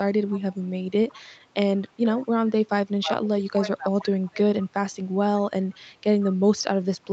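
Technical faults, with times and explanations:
0.3–0.54 s, 1.12–1.22 s, 2.19–2.23 s, 4.25–4.3 s and 5.72–5.77 s, echo leak: a faint, delayed copy of the speech trails in, lagging by about 157 ms. It is clearest in the first scrap, around 20 dB below the speech, weaker at 1.12 and 2.19 s, and only a trace, some 35 dB down, in the last two. The likely cause is a loudspeaker on the far side whose echo canceller let part of the pickup slip back.
1.9–2.08 s and 3.01–4.49 s, speech suppressed in double talk: the talker's level sags and thins, dropping by as much as 20 dB, briefly in the first stretch and for about a second and a half in the second. The likely cause is that both sides spoke together and the echo canceller, unable to tell the talker from the loudspeaker echo, turned everything down.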